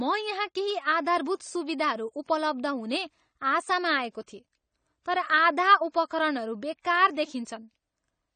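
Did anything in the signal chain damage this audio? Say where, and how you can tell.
Yes, at the codec: dull, smeared speech throughout with nothing above 9 kHz, likely AAC compression starving the spectrum at a low bitrate, around 32 kbps.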